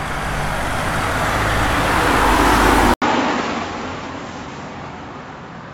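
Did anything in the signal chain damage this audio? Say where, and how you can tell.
Yes. At 2.94 s, after an 80 ms gap, the sound turns dull, with nothing above 7.6 kHz and a faint new noise floor, at the same level: likely an input switched to a poorer device.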